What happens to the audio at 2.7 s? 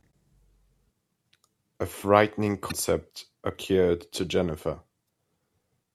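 At 2.68 to 2.72 s the speech hits damaged data in the compressed stream: a stretch of the encoded bytes is corrupted, so the decoder misreads or rejects the frames there, loses frame sync, and has to hunt for the next valid header before it can resume. For about 40 ms the result is a short, harsh, unnatural chirp or squawk in place of the speech, before clean decoding picks up again.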